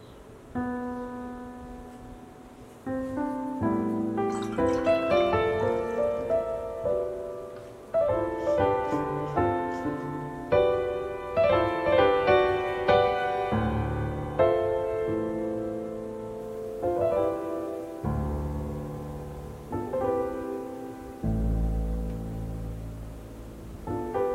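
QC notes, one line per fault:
16.40 s to 24.34 s, low bit depth without dither: From 16.40 s to the end, the sound turns grainy and rough. The grit rises and falls with the signal. Quiet passages suffer most and can break up or sputter. The error sits around 35 dB below the signal. This likely comes from rounding to roughly 9 bits with no dither. The rounding error then tracks the waveform and is heard as distortion.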